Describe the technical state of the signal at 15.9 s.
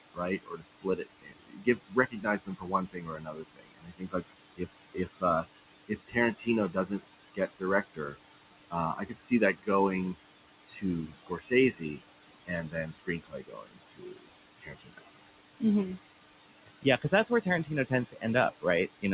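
At 15.9 s the background pumps, dropping away between words and swelling under them: noise suppressor artifacts throughout, cutting room noise by about 18 dB frame by frame.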